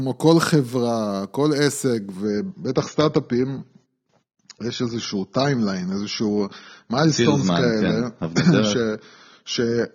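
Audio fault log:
2.25–9.94 s, adaptive stream at a lower bitrate: the speech suddenly loses its top end with no gap, nothing above 6.9 kHz from there to the end, and it goes swirly and smeared. That points to the stream stepping down to a much lower AAC bitrate, roughly 24 kbit/s.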